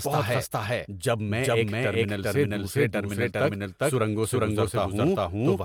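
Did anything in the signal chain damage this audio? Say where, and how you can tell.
Yes. A second copy of the same speech was likely mixed in, either through a slower capture path or an edit holding two copies out of step. This doubled audio track trails by about 400 ms throughout, at roughly the original's level, full-band and with no decay or room colour.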